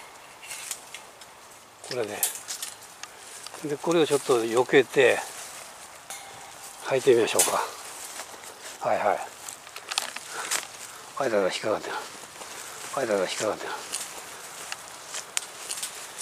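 A second, slower capture path or an out-of-step edit likely mixed the audio in twice, producing a doubled audio track from 12.41 s to the end. A full-band copy trails about two seconds behind at roughly equal loudness, starting abruptly, with no decay or room colour.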